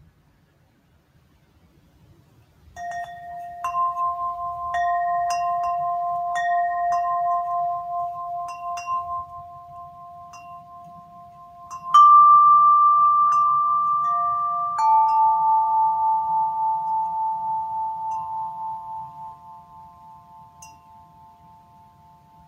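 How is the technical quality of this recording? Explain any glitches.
The technical quality is poor, because a noise suppressor built for speech is processing this audio throughout.

The noise suppressor applied to music or sounds acts across the whole clip. It treats steady tones, ambience and decaying tails as noise and pulls them down. Its gain swings by around 15 dB, so the sound pumps and thins while sharp onsets pass.

Sound is cut by the noise suppressor in three stretches: from 0.00 to 2.73 s, 8.46 to 11.88 s, and 18.8 s to the end. Here the suppressor judges held or fading sound as noise. It drops it by up to about 12 dB, or the decays end abruptly.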